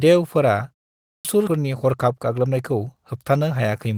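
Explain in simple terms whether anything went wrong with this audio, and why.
At 1.12 s the talking resumes abruptly, with its opening sound missing. This is a clipped start after a pause: during the 0.46 s of silence before it, the playback device went idle, and it took about 0.13 s to wake up, swallowing the beginning.

At 1.47 s the speech suddenly jumps forward with no gap. This is a skip ahead: roughly 0.4 s of audio was dropped because newer sound was already queued, so the two sides of the missing piece are joined almost directly.

From 1.57 to 2.51 s the speech runs about 10 percent fast, sounding hurried, though the pitch stays the same. This is a jitter buffer speed-up: too much audio had piled up, so the receiver trimmed tiny slices, about a tenth of a second in total, to catch up.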